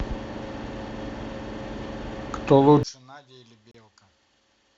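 From 2.83 s to the end, the speech collapses by about 30 dB into a faint residue, likely because one channel is inverted and cancels on mono summing; the waveform shrinks abruptly. At 3.71 s, a gap between stream segments drops in about 31 ms of hard-edged silence, seen as a clean vertical blank stripe across the spectrogram.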